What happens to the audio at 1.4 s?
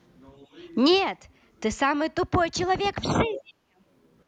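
Nothing goes wrong at 1.4 s; the speech carries on intact through that moment.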